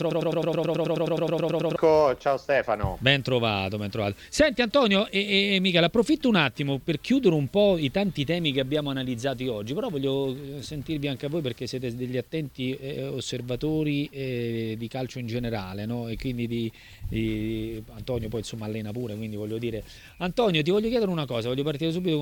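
From the very start until about 1.76 s the audio is caught in a broken-record loop: a fragment of about 107 ms repeats identically 16 times, likely a stalled player or stream resending its last buffer, so the original audio there is lost. A waveform shows one shape tiled end to end, and a spectrogram shows evenly spaced vertical seams.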